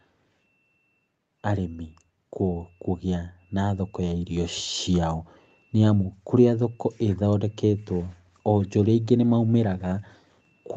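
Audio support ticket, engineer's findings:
Speech and background noise swell together from 3.55 s to 4.61 s, rising about 5 dB over roughly a second. Automatic gain rising: the call's AGC judged the input too quiet and raised its gain gradually, lifting the voice and the noise floor together. Top end stops at 8 kHz, which fits Opus at around 24 kbps in wideband mode on the call path.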